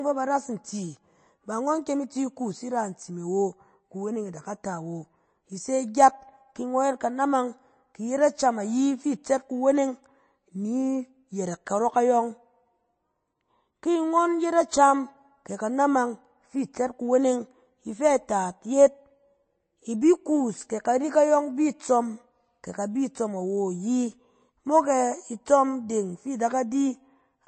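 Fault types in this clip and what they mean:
MP3 compression: The speech sounds watery and swirly throughout, with smeared attacks and nothing above 8.3 kHz. The likely cause is heavy MP3 encoding, fitting a bitrate near 32 kbps: short of bits, the encoder cuts the treble and lets weak frequency lines flicker between frames.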